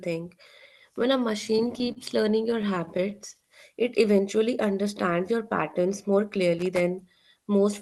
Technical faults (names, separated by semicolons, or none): repeated stalls (stutter); loose connector crackle